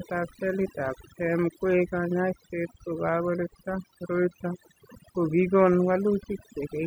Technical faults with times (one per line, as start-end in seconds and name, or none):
0.00-6.86 overdone noise removal